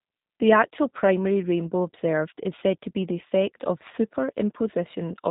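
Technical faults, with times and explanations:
throughout, G.729 codec: speech is rebuilt from a filter and a few pulses, so it sounds rough and synthetic, nothing above 3.8 kHz, which fits an 8 kbit/s stream.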